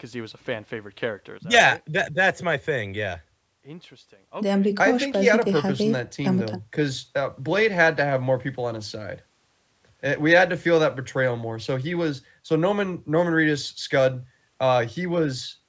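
Nothing goes wrong in this speech recording: it has simply passed through a call's microphone processing, which trims away the deepest bass and leaves nothing above 8 kHz, all of which is expected for a call.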